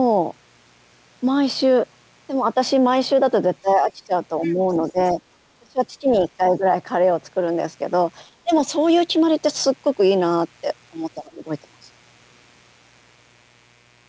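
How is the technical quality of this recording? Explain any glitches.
The recording has four kinds of fault: a constant mains buzz, repeated dips in the speech, a brief second voice leaking in, and an overly bright second half. The call path's bandwidth ends at 8 kHz, which fits the G.722 codec.

Mains buzz runs through the whole clip at about 40 dB below the speech. Sharp switching spikes from a dimmer, rectifier or poorly shielded lead entered the signal twice per cycle of the 60 Hz supply. Their harmonics stack up well into the kilohertz range. The result is a steady, raspy buzz under the speech and in every pause, rather than a smooth low hum.

Speech suppressed in double talk happens six times: 3.62–4.13 s, 4.47–4.58 s, 4.91–5.18 s, 5.59–6.64 s, 8.44–8.5 s and 11.23–11.46 s. The likely cause is an echo canceller that could not tell the talker from loudspeaker echo while both sides spoke, so it pulled the level down. 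The dips range from slight to deep. The worst is around 5.6–6.6 s, where the level falls by about 25 dB.

The other side's voice leaking through appears from 4.41 to 4.9 s as a faint second voice far beneath the talker. It is likely loudspeaker playback picked up by the microphone that the echo canceller failed to remove. It overlaps one of the suppression dips, which fits both sides speaking at once at that moment.

Pre-emphasis left on affects the audio from 7.48 s to the end. A treble boost following the FM 75 µs curve was applied, and the matching de-emphasis never followed. That curve rises about 14 dB at 10 kHz relative to 1 kHz. Within the 8 kHz band, the upper frequencies come out strongly lifted, making the speech thin, glassy and harshly sibilant compared with the first half.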